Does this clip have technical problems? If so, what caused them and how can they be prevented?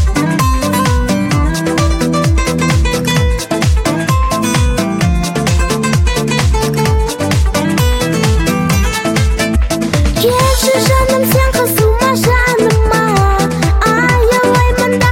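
Yes. At 9.55 s the sound jumps abruptly forward with a brief blip, which points to a stream segment skipped. The likely cause is that one chunk of the segmented stream failed to arrive or load in time, and the player went straight on to the next chunk instead of stalling. Whatever that missing segment held is simply gone, so the audio lurches ahead rather than pausing. Prevent it with longer player buffering, segment retries and a more reliable delivery path.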